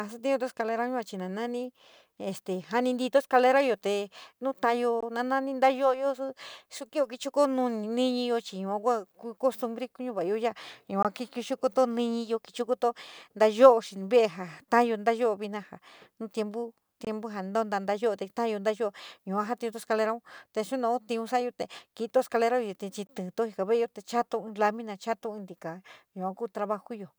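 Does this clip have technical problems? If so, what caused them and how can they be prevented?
Yes. A gap between chunks leaves 21 ms hard-edged silences at 5.01, 11.03, 17.05 and 23.07 s, one at each 6-second chunk join. Prevent it by trimming codec padding and starting each chunk exactly where the previous one ends.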